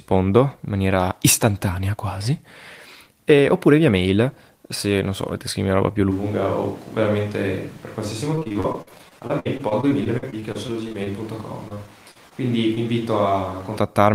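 At 6.12 s the speech turns roomy and hollow, with thinner bass, a drop of about 5 dB and a noise floor only about 25 dB below the voice. The change is abrupt and holds until 13.76 s, which points to a likely switch to a distant microphone. It differs from gradual reverb or EQ drift because it jumps in one step.

From 8.35 to 11.08 s, repeated packet loss (robotic sound) breaks the speech into a choppy stutter. 27 holes, the longest 58 ms, are patched by stretching the preceding sound, so about a quarter of the span is synthetic fill. Unlike a single concealed dropout, the damage keeps recurring.

Overlapping the end of that stretch, from 10.73 to 11.25 s, a jitter buffer slow-down plays the audio at about 95% speed. It adds 37 ms by repeating pitch periods, so sounds drag while the pitch stays put. That preserved pitch is what separates it from a tape-style slowdown.

Repeated packet loss returns from 11.68 to 12.33 s. 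This time it is milder, with five holes of up to 38 ms and about 16% of the span concealed. The same choppiness comes through, but more sparsely.

Finally, short concealed packet loss at 12.75–12.78 s drops 20 ms of audio. The hole is bridged by a brief smear before the real signal blends back in. It is a single blemish, not a run of artefacts.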